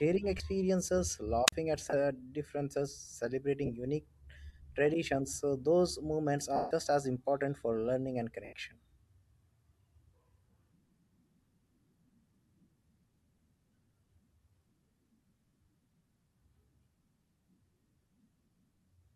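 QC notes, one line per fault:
QC notes, one line per fault:
0.38 to 15.6 s, lost LE Audio frames: short smeared, noisy patches replace the speech at 0.38–0.40, 1.90–1.94, 3.66–3.70, 6.56–6.71, 8.45–8.53 and 15.46–15.60 s. The longest, 150 ms between "traditions so those moments" and "as important for learning", fades audibly. The 20 to 30 ms gaps fit two or three lost 10 ms frames. The decoder repeats the last spectrum with scrambled phase, then fades it. At 15.46 s about 90 ms of loss is scattered over 140 ms, with runs up to around 50 ms. The grainy top of the speech is likely light LC3 coding.
1.47 to 1.52 s, wireless microphone squelch dropout: a burst of hiss is followed by near silence for about 43 ms, then the speech returns. The radio signal faded until the receiver's squelch muted the output.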